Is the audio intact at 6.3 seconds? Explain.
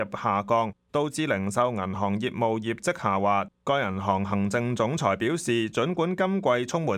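Yes, the audio at 6.3 seconds is intact, with no dropout, click, distortion or other fault audible at that moment.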